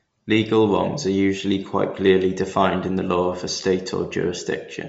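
Bluetooth LC3 compression throughout this speech: nothing above 7.7 kHz, with a plainly grainy, breathy edge from noise-filled upper bands, likely LC3 at a low bitrate near 32 kbps.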